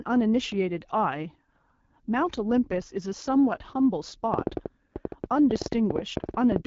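From start to finish the speech has passed through the AMR wideband (HD Voice) codec at one of its lowest rates, which fits 8.85 kbit/s. At that rate the vocal tract model and its pulse excitation are coded too coarsely, and the top band is filled with shaped noise, not real detail. The result is plainly audible: the speech sounds rough and raspy throughout, and nothing reaches above 7.5 kHz.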